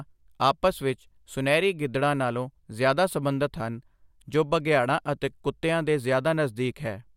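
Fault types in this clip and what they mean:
No technical faults can be heard anywhere in the recording; the speech signal holds steady, with no dropouts, distortion or glitches at any point.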